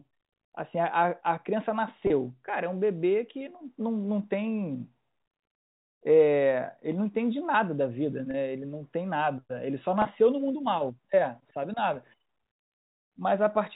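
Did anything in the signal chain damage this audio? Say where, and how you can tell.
Yes. The network stage dropped audio three times, at 2.07, 8.31 and 10.02 s, each gap about 30 ms long, which points to a single lost packet each time. This is packet loss with pitch repetition: the receiver filled each hole by repeating the last pitch period, so the speech briefly holds on a slightly buzzy, frozen tone before carrying on. A dropout or clipped edit would leave silence or a click instead. The G.711 telephone coding underneath limits the sound to below 4 kHz, which is expected for that format.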